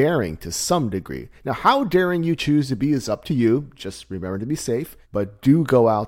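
No technical faults can be heard anywhere in the recording, so there is nothing to describe in time order.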